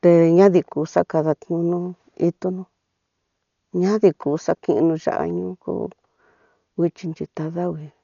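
Throughout the speech, the sound is dull and boxed in, with nothing above 7 kHz, and a rough, fluttering hiss clings around voiced sounds and their harmonics. This is heavy Dolby Digital compression damage, likely from an AC-3-type encode at a very low bitrate, which fits something around 48 kbps. Starved of bits, the encoder narrowed the band and left many frequency lines empty, so the decoder filled them with noise.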